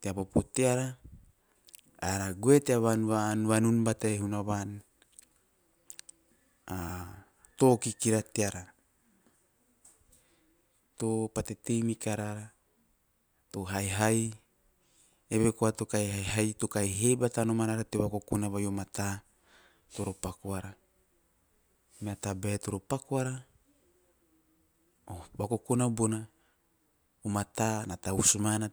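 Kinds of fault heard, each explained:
No technical faults heard.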